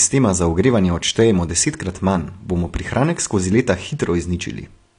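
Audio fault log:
Throughout: AAC compression. The speech sounds dull and smeared, with nothing above 10 kHz and a warbling, fizzy texture on sibilants and held sounds. This is likely AAC-LC coding at a low bitrate, consistent with about 32 kbps.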